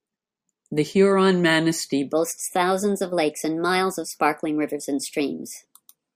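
From about 2.13 s to the end, the speech switches to a section at the wrong speed: it runs 1.17 times too fast, so pitch rises roughly three semitones along with the pace. The likely culprit is playback or an edit tied to the wrong clock, leaving the talker sounding chirpy and hurried.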